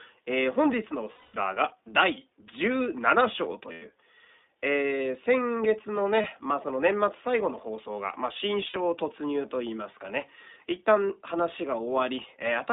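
The speech here has gone through the iLBC codec, a narrowband VoIP coder that codes each short frame on its own, probably at around 15 kbit/s with 20 ms frames. The line passes only about 250 Hz to 3.7 kHz, so the sound is thin and muffled at the top, and the coding damage is plainly audible as a rough, slightly synthetic edge on the voice. On top of that, there are lost iLBC frames at 1.12–1.36 s, 3.72–3.84 s, 6.22 s and 8.68–8.77 s. Packets went missing, and the decoder filled each gap by repeating the last pitch cycle blended with noise, so each dropout sounds like a held, faintly buzzy or breathy vowel rather than silence. The gaps last about 220, 100, 20 and 60 ms, which fits runs of eleven, five, one and three 20 ms frames. The longest gap fades as it goes on. Because each frame stands alone, the voice snaps back almost immediately after each gap.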